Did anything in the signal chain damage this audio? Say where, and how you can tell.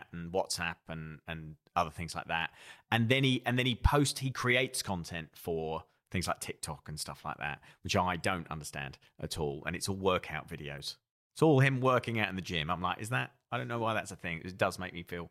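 Yes, a corrupt frame was decoded, so the damage happened at the codec stage. At 10.77 to 10.80 s there's a brief glitch in the speech, spanning about two compressed frames and fairly quiet, peaking around -35 dBFS. Flipped bits in those frames went straight into the decoder, which trusted misread gains and codes and put energy at the wrong frequencies for just as long as the damaged frames lasted.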